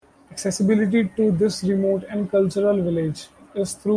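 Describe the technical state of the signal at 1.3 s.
At 1.3 s the signal is intact, with no dropout, distortion, noise burst or other fault in the speech at that point.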